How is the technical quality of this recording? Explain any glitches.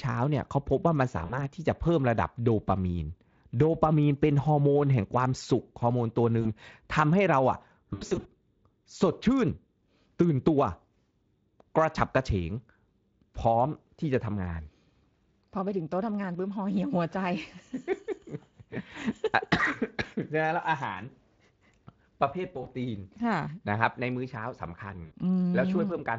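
The recording has five short dropouts, heard through a light Speex coding texture. They are VoIP packet loss concealed by the speech codec, at 1.25–1.37 s, 6.41–6.47 s, 7.93–8.28 s, 22.63–22.67 s and 25.05–25.14 s. Lost packets leave gaps, so the decoder repeats its last pitch and filter at falling gain. Each gap becomes a brief buzzy or noisy, fading smear. The 7.93 s patch is the longest, with runs of up to 80 ms over about a third of a second.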